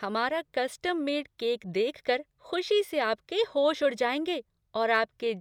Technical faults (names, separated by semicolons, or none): none